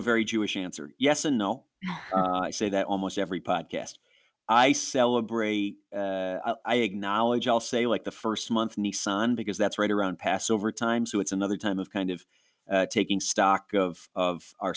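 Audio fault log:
throughout, aliasing: sibilants and fricatives come out gritty and metallic, with harsh tones that don't belong to the speech. The sample rate was lowered without first filtering out content above the new limit, which fits a drop from 48 kHz to 16 kHz. Energy above 8 kHz folds back below it as false frequencies, roughly 25 dB under the speech. On a spectrogram, energy runs hard up to an 8 kHz ceiling, with mirrored streaks under each sibilant.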